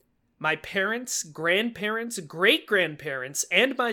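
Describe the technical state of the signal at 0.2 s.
The signal is intact at 0.2 s, with no audible fault at that point in the speech.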